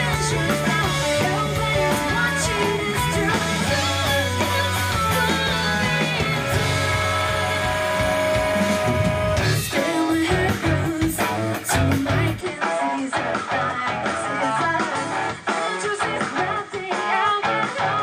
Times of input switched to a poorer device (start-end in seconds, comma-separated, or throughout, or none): 12.41-18.03